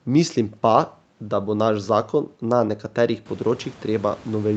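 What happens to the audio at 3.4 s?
Nothing goes wrong with the audio at 3.4 s; the speech passes through that moment intact, with no dropout, glitch or distortion.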